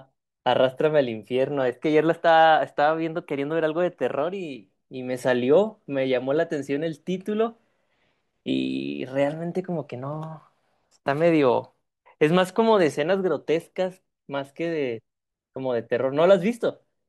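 At 10.40 s there is a block of digital silence: about 5.8 ms of the speech is replaced by zeros, consistent with a 256-sample block. The signal drops to silence and returns with no fade, and a gap this short is heard as a brief tick or dip.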